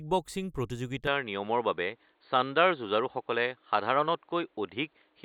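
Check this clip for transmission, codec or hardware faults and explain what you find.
One fault is audible: from 1.07 s to the end, the input sounds switched to a poorer device. The speech abruptly loses everything above 4.5 kHz and turns dull and boxy, with a new, faint background noise well below the speech. There is no gap at the switch and the level stays about the same. The likely cause is a change of capture hardware mid-recording. Unlike a codec narrowing its bandwidth, the tone and noise floor change along with the band.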